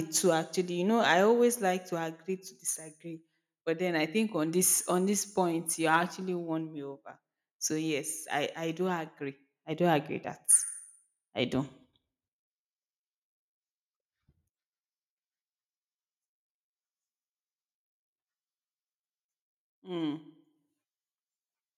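At 1.10 to 1.12 s and again at 5.94 to 5.96 s, the speech picks up a short, harsh crackle right on the loudest peaks. That's the signature of microphone overload: the input level was likely set a touch too hot, so those peaks pushed about 1 dB past the converter's ceiling and got their tops sliced flat. Only a small fraction of samples are clipped each time, so it's brief grit rather than sustained distortion.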